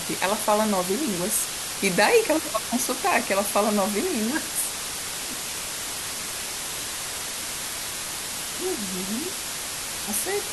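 From start to finish the speech sits under a loud, even hiss from low bit depth with dither. The signal has been reduced to 4 bits, with dither added before rounding, so the coarse steps become steady white noise only a few decibels below the speech. Without dither, the same 4 bits would give gritty distortion that follows the speech and drops out in pauses. Here the hiss stays constant and clean-edged, even between phrases.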